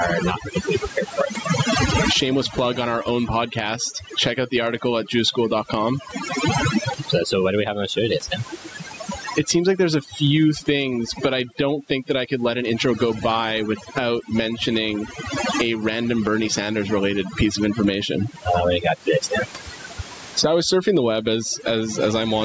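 Overdone noise removal runs through the whole clip. The denoiser cuts bands near its noise estimate, so the background drops and breaks up into twinkling specks.

Gain pumping is also present throughout. The gain swings about 25 dB. The likely cause is excessive input gain driving a fast limiter.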